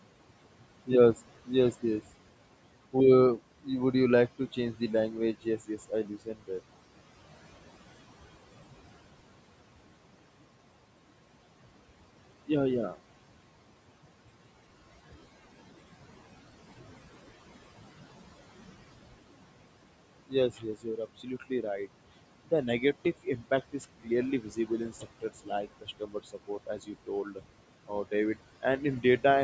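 Noise suppressor artifacts run through the whole clip. The suppressor pulls the room noise down by about 17 dB in gaps, then lets it rise under the speech.

Speech cut by the noise suppressor comes next, in five stretches. They fall at 3.37 to 3.94 s, 4.39 to 6.5 s, 20.28 to 21.88 s, 22.45 to 27.42 s and 27.88 to 28.64 s. The suppressor mistakes quiet speech for noise and turns it down by up to about 18 dB. The longest stretch loses roughly one and a half seconds of sound in total. The speech that is turned down sounds swallowed or faint.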